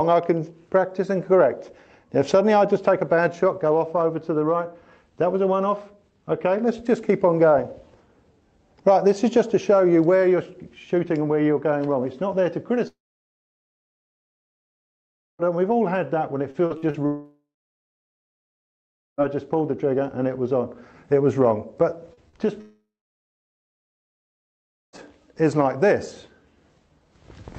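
At 12.87 s the stream is likely cut by a long network dropout. No audio reaches the receiver until 15.42 s, so about 2.5 s of the signal is simply gone. The receiver briefly extends the last sound as a fading buzz, then falls to silence for most of the gap, roughly 2.4 s, before the audio resumes further along with the missing stretch never recovered.

From 16.51 to 16.97 s there is repeated packet loss, heard as robotic sound. Four separate holes open in under half a second, the longest about 43 ms. Each is patched by stretching the preceding sound, so about a third of the span is synthetic fill. That gives a choppy stutter with fragments missing.

A second likely long network dropout follows at 17.06 s and lasts to 19.21 s, about 2.1 s lost. The same decaying fill gives way to roughly 1.7 s of silence.

Two short concealed packet losses fall at 22.14–22.20 s and 22.29–22.36 s. Each drops about 40 ms of audio, which the decoder covers by continuing the sound just before it. 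They are heard as quick smears or wobbles.

A third likely long network dropout runs from 22.61 to 24.96 s, about 2.3 s missing, with around 2.1 s of it silent after the brief fading tail. Throughout, the call path's Opus coding limits the audio to below about 8 kHz.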